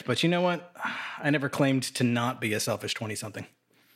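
No technical faults can be heard anywhere in the recording.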